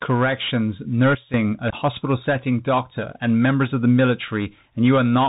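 Bluetooth CVSD headset codec runs through the whole clip. The speech is squeezed into a narrow band with nothing above 4 kHz, sibilants turn scratchy, and a granular hiss sits under everything. This is the one-bit, step-adapting delta coding of a 64 kbps headset link.

A sudden gain jump occurs from 1.15 to 1.34 s. The speech and its background hiss drop together by about 12 dB, then return. The abrupt, unramped change is likely from a digital gain step or bit shift applied without smoothing.

Unconcealed Bluetooth headset packet loss appears at 1.70 to 1.74 s, just before "setting doctor and members". About 22.5 ms of audio, several packets' worth, is replaced by silence or an idle pattern with hard edges. The speech comes back briefly quieter, as a CVSD decoder's collapsed step size rebuilds. A second, tiny hole at 4.28 s, after "and members of the", removes 3.8 ms, about one packet.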